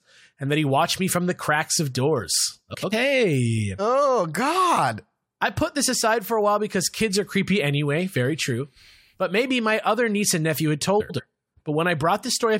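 Two neighbouring runs of speech frames, each about 93 ms, were decoded in swapped order (frames out of order) at 2.73–2.93 s and 11.00–11.20 s, producing a garbled flutter.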